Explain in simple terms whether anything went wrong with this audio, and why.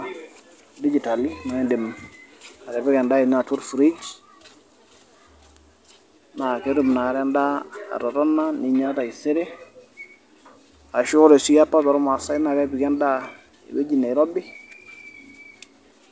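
Nothing went wrong with this audio; the speech came through an ordinary internet call, which is why it has the muffled top end of call audio, with nothing above 8 kHz.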